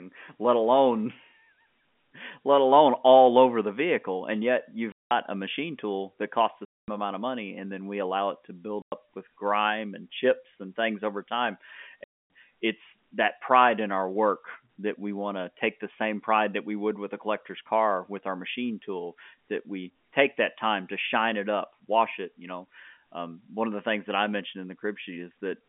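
Packets of this speech were lost and the receiver filled the gaps with silence, leaving hard-edged holes: 4.92–5.11 s before "a machine tool that", 6.65–6.88 s after "tool that costs the", 8.82–8.92 s after "allow it to build", and 12.04–12.30 s. The lengths fit 10 ms packets. The G.711 telephone band stays intact around them.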